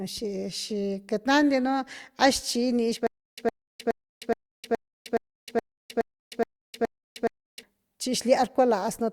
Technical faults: stutter with silent gaps

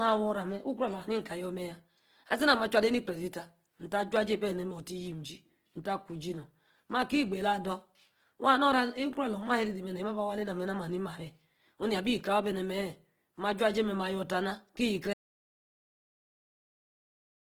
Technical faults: Opus compression; audio dropout to silence

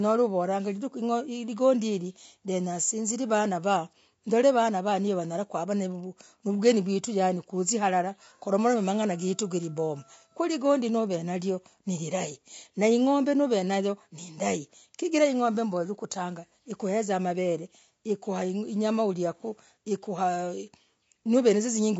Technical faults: low-delay AAC compression

